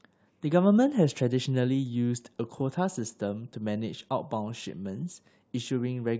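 Nothing stood out as a technical fault on listening to this speech recording.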